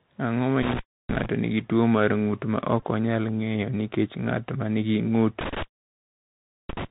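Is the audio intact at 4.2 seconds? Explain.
No. At 4.2 seconds the speech carries the Bluetooth CVSD headset codec damage present throughout the clip. CVSD encodes each sample as a single up-or-down bit and adapts its step size, which fits a 64 kbit/s stream and leaves nothing above 4 kHz. At this point the speech is narrow and muffled, s sounds come out scratchy, loud bright moments distort where the step can't keep up, and a granular hiss sits underneath.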